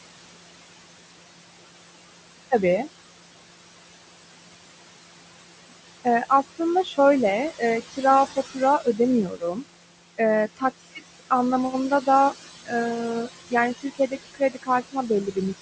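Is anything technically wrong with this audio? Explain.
Yes. Throughout the speech, the background sinks between phrases and swells back under them. These are noise suppressor artifacts: the suppressor pulls down bands it judges to be steady noise frame by frame, cutting that noise by about 21 dB. The room noise sits about 12 dB below the speech, and the call microphone processing caps everything at 8 kHz.

There is also speech cut by the noise suppressor at 6.04–6.98 s, 7.5–8.04 s, 8.36–9.64 s and 13.26–15.37 s. Parts of these stretches sound swallowed or faint, dipping by up to about 15, 17, 18 and 20 dB respectively. The suppressor mistook quieter speech for noise and lowered it, affecting roughly a fifth of a second in each of the first two spans, half a second in the third and most of a second in the last.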